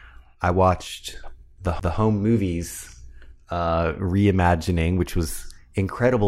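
At 1.80 s, after "I watched", a CD skip: the laser jumps tracks, causing a brief gap, shown as a vertical spectrogram stripe.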